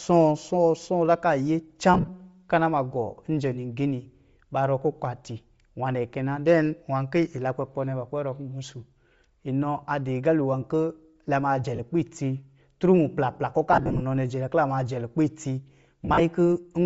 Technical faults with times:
0.00-16.86 Bluetooth LC3 compression
1.94-2.09 lost LE Audio frames
11.76-11.80 lost LE Audio frames
13.73-14.02 lost LE Audio frames
16.05-16.21 lost LE Audio frames

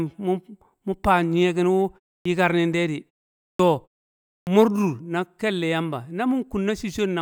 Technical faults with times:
2.21-2.25 clipped start after a pause
3.55-3.59 clipped start after a pause
4.43-4.47 clipped start after a pause

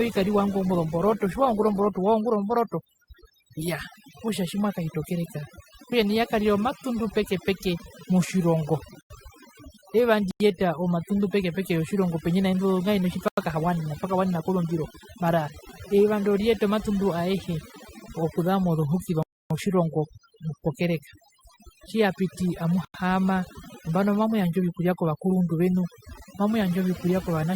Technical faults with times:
0.00-27.56 overdone noise removal
0.00-2.00 adaptive stream starting at a low bitrate
9.01-9.10 block of digital silence
10.31-10.40 block of digital silence
13.28-13.37 block of digital silence
19.23-19.50 block of digital silence
22.85-22.94 block of digital silence

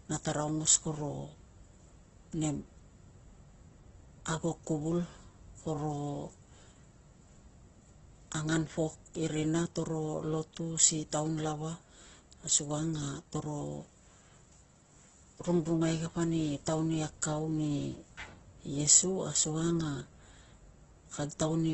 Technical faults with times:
0.00-21.73 Opus compression

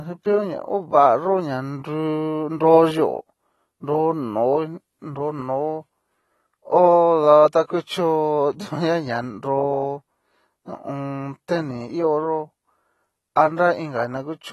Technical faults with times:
0.00-14.53 AAC compression

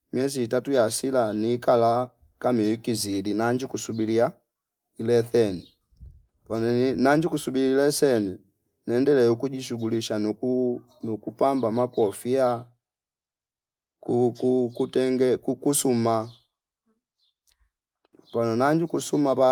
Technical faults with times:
none

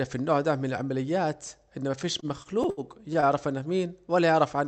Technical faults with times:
1.99-3.25 repeated stalls (stutter)

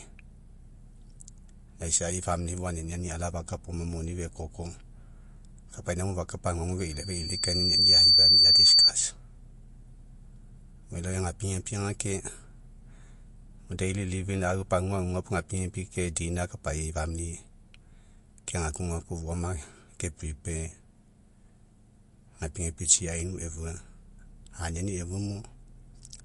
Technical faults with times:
0.00-26.25 MP3 compression
6.78-8.92 loudspeaker feedback squeal

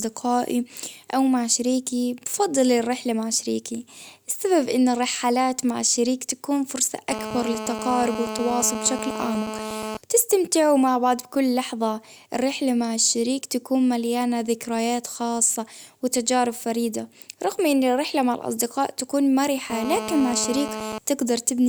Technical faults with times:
7.12-9.97 GSM phone buzz
19.70-20.98 GSM phone buzz

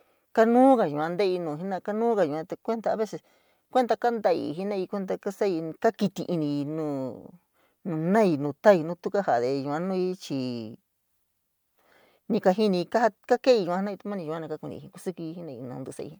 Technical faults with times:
none

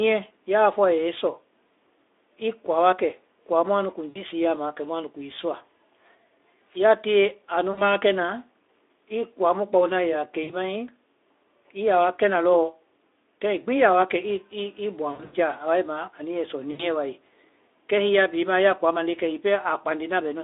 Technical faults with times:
4.09-4.22 VoIP packet loss concealed by the speech codec
7.72-7.82 VoIP packet loss concealed by the speech codec
10.43-10.55 VoIP packet loss concealed by the speech codec
15.11-15.34 VoIP packet loss concealed by the speech codec
16.71-16.84 VoIP packet loss concealed by the speech codec

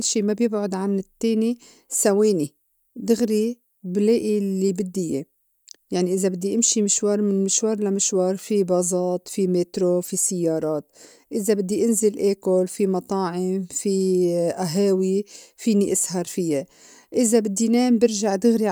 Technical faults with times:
none

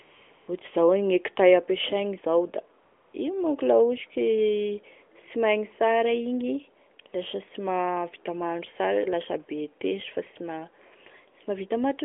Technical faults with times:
0.02-0.48 AMR comfort noise
2.84-3.14 AMR comfort noise

